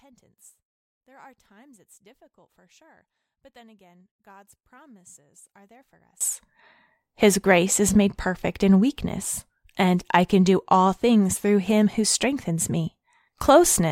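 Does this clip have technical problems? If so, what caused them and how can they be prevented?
Yes. From 0.0 to 6.21 s the speech drops by about 32 dB, leaving a faint residue, likely from one channel inverted cancelling the centre in mono. Check channel polarity before summing stereo to mono.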